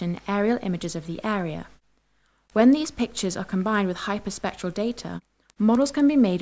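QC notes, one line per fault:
throughout, resampler restarted on every block: steady 4 Hz ticks wherever sound plays, because each 250 ms block was resampled alone, leaving an error at every block edge.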